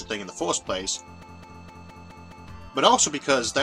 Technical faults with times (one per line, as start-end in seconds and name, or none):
1.23-2.47 broken-record loop
1.49-1.54 damaged data in a compressed stream